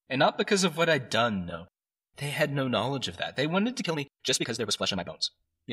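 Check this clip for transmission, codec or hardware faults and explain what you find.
One fault turns up, a time-stretched section. From 3.78 s to the end, the speech suddenly runs at twice its pace while the pitch stays put. The likely cause is software squeezing that stretch to fit a length by dropping short pieces. It sounds rushed. On a spectrogram, the harmonics keep their frequencies while syllables crowd together, and the waveform shows the abrupt change in pace at 3.78 s.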